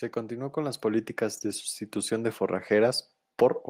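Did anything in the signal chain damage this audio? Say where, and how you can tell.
Yes. The automatic gain rising happens in the call processing stage, where the automatic gain control decided the input was too quiet and started pushing its gain up. From about 0.28 s to 3.04 s the level climbs steadily by about 4 dB. The background floor swells right along with the speech, which is the giveaway: a talker getting louder wouldn't drag the room noise up too. It's a slow ramp, nearly three seconds, not a jump.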